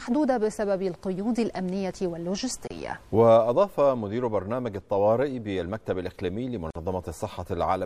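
Throughout, the sound is watery and swirly, with smeared attacks; this is likely MP3 compression at a low rate, around 64 kbps. A spectrogram shows a hard treble ceiling and flickering high-frequency patches.

At 2.67 s and 6.70 s, silences of 30 and 49 ms open before the sound resumes. These are gaps at joins of encoded pieces, about 4 s apart. They appear as brief dropouts with softened edges in the waveform and blank vertical stripes on a spectrogram.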